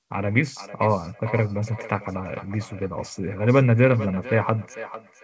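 From 0.55 s onward, feedback echo between two devices: another device replays the call into this microphone, so speech recurs roughly every half second, ringing, about 15 dB down.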